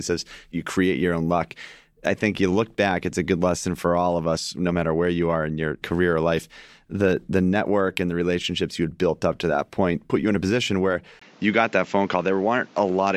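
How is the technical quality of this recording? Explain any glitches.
The recording has one glitch near the end. At 11.19 s, right after "in a position where", the input likely switched to a poorer device. After a 20 ms gap, a narrower band cuts everything above 7.6 kHz, so the speech turns dull through 13.17 s at much the same level, over a new background noise roughly 30 dB below it.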